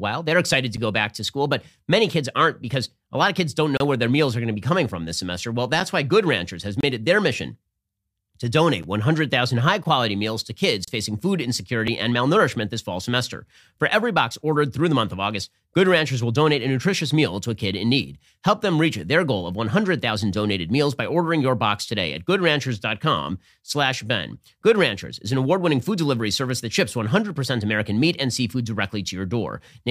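Speech with a gap between stream segments at 0.77, 3.77–3.81, 5.80, 6.81–6.83, 8.83, 9.84, 10.85–10.88 and 11.87 s. Misaligned segment timestamps leave holes filled with silence that fall on a one-second segment grid and last 4 to 31 ms. On a waveform each shows as a sharp-edged flat break, and on a spectrogram as a thin vertical blank strip.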